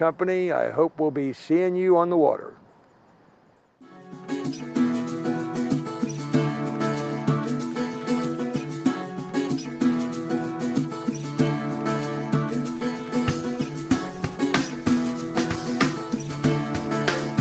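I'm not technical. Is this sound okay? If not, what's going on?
Yes, it sounds fine; nothing is wrong with it.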